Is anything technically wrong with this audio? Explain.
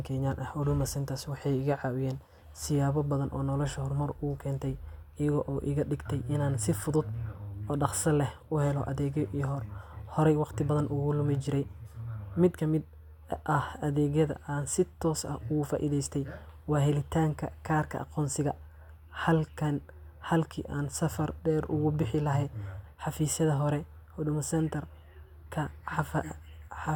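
No, nothing technically wrong turns up anywhere in this speech recording; it all sounds just as it should.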